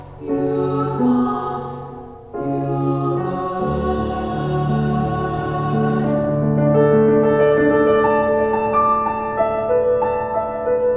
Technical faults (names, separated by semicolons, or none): none